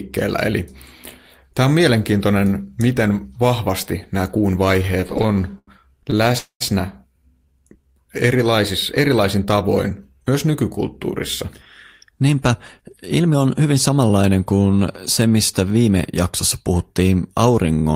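From 4.79 to 6.36 s the speech breaks into repeated stalls, a stutter of 24 short gaps. Packets kept arriving behind the playback rate, so the jitter buffer emptied again and again, and each hole was filled by stretching the last sound, the longest for 90 ms. Together the fills add 326 ms, about a fifth of that stretch, and nothing is lost. What sets it apart from a single freeze is the choppy, dragging rhythm of many small hitches.

Straight after, from 6.38 to 6.62 s, comes a call audio freeze. The sound hangs as a fading buzz for 224 ms, the last 100 ms of it silent, and then carries on exactly where it stopped. The likely cause is a packet hold-up that drained the buffer and left the delay 224 ms longer. Unlike the stutter, this is one continuous hang that decays into silence, not a series of brief repeats.

Between 7.45 and 8.57 s a jitter buffer slow-down stretches the speech to 90 % of normal speed. 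To rebuild its reserve, the receiver repeated single pitch periods and slices of pauses many times over, adding 119 ms. Pitch stays put while sounds are drawn out. This separates it from the stalls: the audio never stops or hitches, it simply runs slow and smooth.

From 12.05 to 13.90 s a jitter buffer speed-up does the reverse. The buffer was holding more than its target delay, so it trimmed pieces of one or a few pitch periods again and again, about 150 ms in all, and the speech plays at 107 % speed. The pitch stays the same while the delivery sounds hurried. That constant pitch is the mark of time compression, as opposed to a faster playback clock, which would raise the pitch as well.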